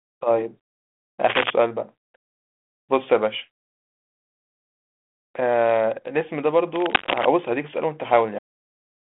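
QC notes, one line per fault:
1.29 to 1.50 s and 6.75 to 7.25 s: cable scratch noise. Dense, uneven rustling bursts sit about level with or above the speech, likely from a worn cable or connector being moved. Unlike steady hiss or single clicks, the texture is irregular and scratchy.
8.38 s: cut-off end. The speech halts mid-sound and drops straight into digital silence with no decay, because the last buffers were never written. Unlike a fade or a natural pause, nothing tails off.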